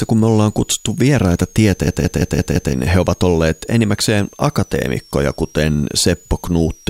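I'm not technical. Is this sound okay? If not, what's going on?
No. Two things are wrong. A switching supply whistle runs through the whole clip: a faint, high whistle somewhere between about 5.4 and 6.9 kHz, coming from a switching power supply.

From 1.88 to 2.73 s, right after "me ollaan kutsuttu vieraita", there is a system hang loop. The computer briefly froze, and one 171 ms scrap of sound repeated exactly five times, about six per second, as a machine-gun stutter. Normal speech resumes at "he ovat olleet enimmäkseen", with roughly a second of audio lost.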